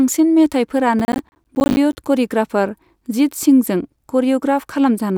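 Processor overload crackle hits the speech from 1.0 to 1.97 s, where around thirty silent dropouts, fitting missed buffers of about 10 ms, tear it into gritty crackle.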